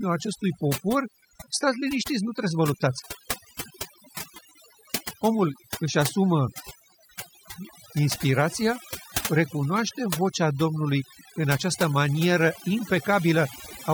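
Throughout the speech, overdone noise removal mutes bands it mistakes for noise, leaving twinkling specks, unlike a gate's whole-signal pumping.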